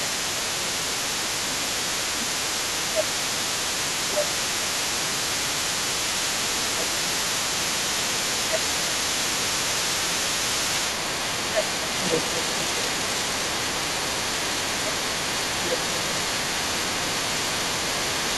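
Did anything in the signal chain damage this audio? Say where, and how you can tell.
Yes. Analogue wiring let mains buzz in: a raspy 60 Hz buzz with harmonics sits at about 20 dB below the speech for the whole clip.

Call processing shows speech suppressed in double talk: the speech dips by about 10 dB across 0 to 2.27, 2.72 to 5.88, 6.45 to 10.63, 11.22 to 12.99, 13.36 to 14.98 and 15.59 to 18.18 s, likely the echo canceller ducking both talkers.

Call processing also lets the other side's voice leak through: a second voice runs under the speech throughout, about 10 dB lower, likely residual loudspeaker echo the canceller missed.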